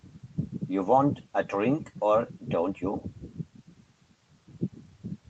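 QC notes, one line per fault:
No faults to log in these QC notes.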